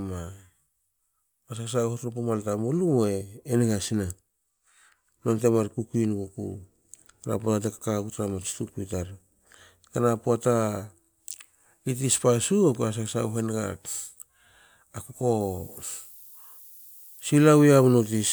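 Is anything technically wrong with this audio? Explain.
Yes. From 15.41 s to the end at 18.33 s, low bit depth with noise shaping leaves a thin, steady hiss climbing toward the treble, roughly 20 dB below the signal. The speech is rounded to about 8 bits and the error is pushed upward. Flat hiss or plain truncation distortion would not tilt like this.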